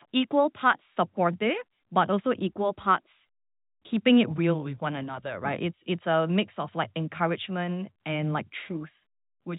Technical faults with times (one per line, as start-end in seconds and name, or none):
none